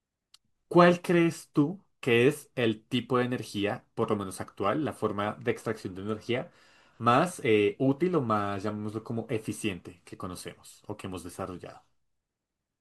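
No technical faults can be heard anywhere in this speech, so there is nothing to describe in time order.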